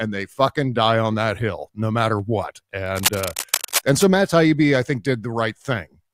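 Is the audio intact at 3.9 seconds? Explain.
No. From about 2.86 to 4.04 s, right after "hill no matter what", cable scratch noise runs over the speech, and 3.9 s falls inside it. Dense, irregular bursts of scratching and rustling sit only slightly below the speech. The likely cause is a worn cable, connector or control being moved, so its contact resistance jumps around. Unlike steady hiss or isolated clicks, the noise comes in uneven clusters that stop once the movement ends.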